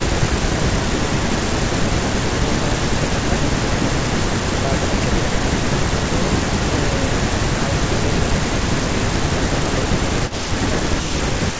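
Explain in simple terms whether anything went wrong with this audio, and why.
Between 10.28 and 10.47 s, a faint copy of the speech returns about a third of a second late. This is an echo leak, likely from a loudspeaker feeding back into a microphone. Unlike room reverberation, it is a distinct repeat rather than a smooth tail.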